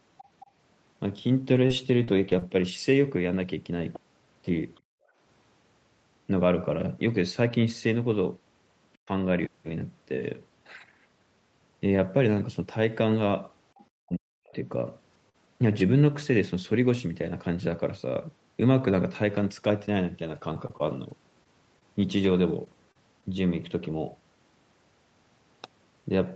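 From 1.55 to 2.43 s there is repeated packet loss with a robotic sound. Four packets go missing in quick succession, the longest gap 35 ms, and each is patched by extending the preceding sound. About a tenth of a second is synthesized, roughly 11% of that span, which gives the speech a choppy edge.

At 4.75 to 4.80 s a faint scrap of a second voice comes through, about 40 dB below the talker. This is likely the other side's voice leaking through, loudspeaker playback that the echo canceller did not fully remove from the microphone.

Right after, from 4.81 to 5.18 s, the background is gated by the echo canceller. The room sound drops by as much as about 36 dB for around 0.4 s, then comes back when the suppression releases.

At 9.05 to 9.09 s the talker dips by about 20 dB for a few hundredths of a second. The likely cause is speech suppressed in double talk, with the canceller attenuating the near-end voice while the far end is active.

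At 13.78 to 13.85 s another brief fragment of the other side's voice leaking through appears, about 30 dB below the speech. The likely source is again loudspeaker echo that the canceller left behind.

From 14.0 to 14.56 s the talker is pulled down by as much as about 40 dB for roughly half a second. This is most likely speech suppressed in double talk.

At 14.79, 15.13 and 15.80 s, single 20 ms frames are lost packets rebuilt from error correction. The decoder plays the low-bitrate Opus in-band copy carried by the next packet, so there is no gap, only a short patch that sounds rougher and noisier within the 8 kHz call bandwidth.

From 15.29 to 15.36 s there is a short concealed packet loss. About 40 ms never arrived and about 45 ms was filled by continuing the previous sound, which is heard as a brief smear before the real audio blends back in.

From 19.78 to 23.35 s there are scattered short gaps, around ten of them, the longest about 30 ms. 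They cover about 5% of the stretch and leave isolated ticks and small hiccups where each hole was patched.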